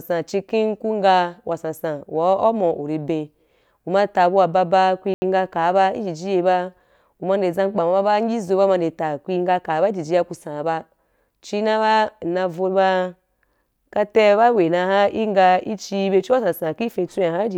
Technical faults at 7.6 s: none

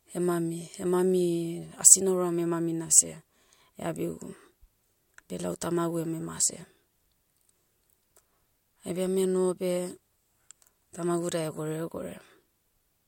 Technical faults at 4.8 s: none

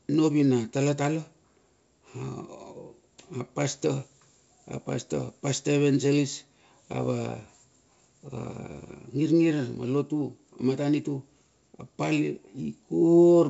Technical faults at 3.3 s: none

